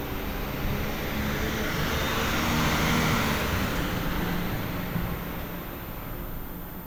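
Throughout the recording a switching supply whistle sits about 20 dB below the sound, a thin high tone wandering between 13.5 and 13.6 kHz, from a power supply's converter oscillating audibly.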